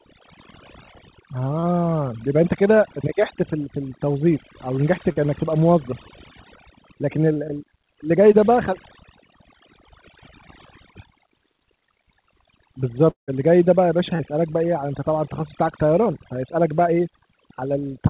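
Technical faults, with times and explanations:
Throughout, overdone noise removal: the background drops and breaks up into twinkling specks, because frequency bands near the estimated noise were cut away.
1.6 s, 5.12 s, 7.34 s, 8.32 s and 14.16 s, short concealed packet loss: brief smears or wobbles where 20 to 40 ms went missing and the receiver extended the previous sound to fill each hole.
13.1 to 13.3 s, long network dropout: the sound stretches into a fading buzz, then about 0.13 s of silence. The likely cause is audio failing to arrive for nearly 0.2 s.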